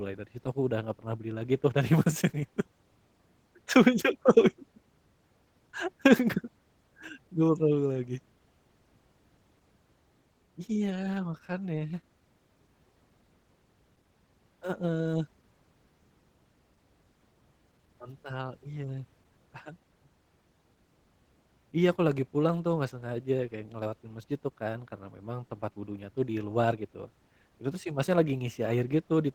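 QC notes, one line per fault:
Throughout: Opus voice compression. The speech has a plainly audible coded quality: hoarse, faintly robotic texture. That is consistent with Opus in hybrid mode at a low rate around 16 kbps. A linear-prediction coder carries the band up to 8 kHz with coarsely quantised excitation, and a sparse transform layer fills the band above it to fullband.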